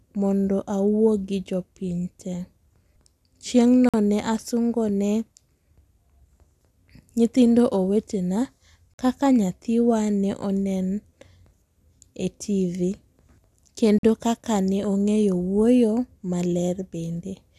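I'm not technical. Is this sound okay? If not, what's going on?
No. There is a gap between chunks at 3.89, 8.94 and 13.99 seconds: the speech stops for about 48 milliseconds every five seconds, cleanly cut, then carries on. Unlike a dropout, nothing is missing. The speech is simply paused at each join between pieces.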